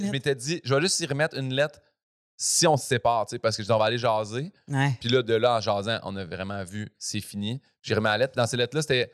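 At 2.07 s the speech cuts out abruptly and the output stays silent until 2.34 s, a gap of about a quarter of a second. This is a playback stall: the likely cause is that the player ran short of buffered data, or its output thread was held up, so nothing reached the device for that stretch. When sound returns, it picks up mid-flow rather than at a natural pause, which makes the break obvious.

From 2.34 s to 4.02 s the player works off the backlog created by the stall through time-compressed catch-up. It drops short slices of the signal and cross-fades across the joins, so this stretch runs at about 1.15 times normal speed while the pitch stays where it should be. The speech sounds hurried until normal pacing resumes after 4.02 s.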